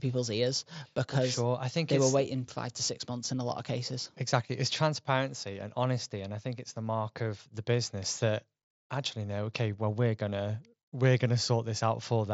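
No technical faults are audible.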